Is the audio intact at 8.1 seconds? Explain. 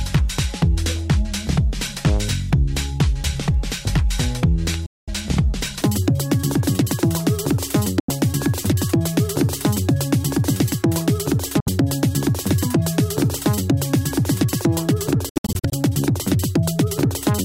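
No. From 8.00 to 8.10 s, likely a Bluetooth dropout: packets missed the headphones, leaving a gap of about 85 ms, consistent with four lost frames, before sound resumes mid-flow. The whole stretch from 5.82 s to the end is a section at the wrong speed, most likely resampled to the wrong clock, so it plays at double speed, hurried and pitched up by about 10 semitones.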